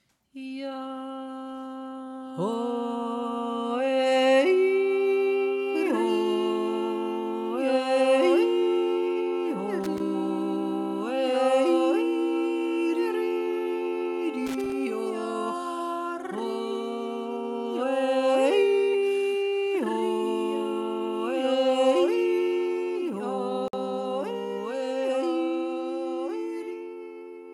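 An irregular burst of crackle and scratching chops the sound at 9.84 to 10.0 s and again at 14.47 to 14.72 s, the mark of loose connector crackle from a worn or dirty contact making and breaking. At 23.68 s a silence of about 53 ms opens with smeared edges, then the sound resumes where it stopped: a gap at a join of encoded pieces, left by untrimmed encoder delay and end padding.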